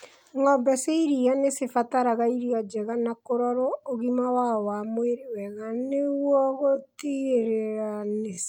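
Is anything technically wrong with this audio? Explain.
Yes. From 5.49 s to the end, right after "ũgima wao wa mwĩrĩ", there is a time-stretched section: the pace drops abruptly to about half speed while pitch stays put, likely from software repeating short slices to lengthen the audio. That leaves it dragging, unlike a simple slowdown, which would also lower the pitch.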